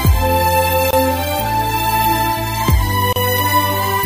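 The audio has two brief dropouts, each a gap at a join of encoded pieces: at 0.91 s a silence of about 24 ms, and at 3.13 s one of about 33 ms. Each time, the sound fades out briefly and then resumes exactly where it left off. The pieces on each side were separately encoded and butted together without trimming the encoder's leading delay and last-frame padding. On a waveform each shows as a notch with smeared, sloping edges; a spectrogram shows a thin full-band blank column, slightly smeared at its borders.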